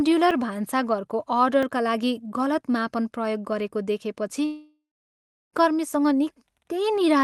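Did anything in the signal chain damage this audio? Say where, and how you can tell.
Yes. Two kinds of damage are audible. The first is a block of digital silence at the driver or buffer stage. It happens twice, at 0.31 s and at 1.63 s. Each time the sound drops straight to silence and comes back with no fade, and being well under 15 ms, each is heard as a tick or dip. The first hole lasts about 5.3 ms, which fits a 256-sample buffer. The second lasts about 2.7 ms, which fits a 128-sample buffer. The output buffer was likely not filled in time.

The second is a long network dropout, from 4.45 s to 5.56 s. About 1.08 s of sound never arrives. The receiver carries the last sound forward as a fading buzz or hiss. That decays into about 0.69 s of near silence. The audio then resumes further on, and the missing stretch is not recovered. The likely cause is packets lost on the network. The call path's Opus coding stays in place throughout, with the top of the spectrum cut off near 12 kHz.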